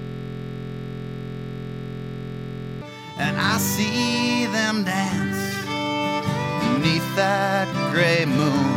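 From the start to 2.82 s there's a system hang loop: playback froze and one 23.22 ms buffer kept replaying, giving a steady 43.1 Hz buzz.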